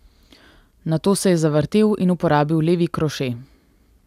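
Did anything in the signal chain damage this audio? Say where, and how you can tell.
No, nothing damaged it.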